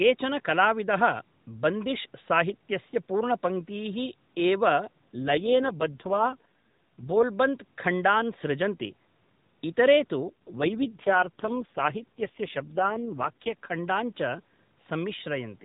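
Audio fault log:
5.16 to 7.24 s and 10.26 to 13.55 s, AMR rate drop: the mobile link weakened twice, and the AMR-NB codec was switched to a lower rate so more of each frame's bits could go to error protection. With fewer bits to model the vocal tract and its pulses, the speech turns rougher, buzzier and more synthetic, which fits a fall from the 12.2 kbps mode to 4.75 kbps. The band stays the same and there is no gap, and the cleaner sound returns once the rate recovers.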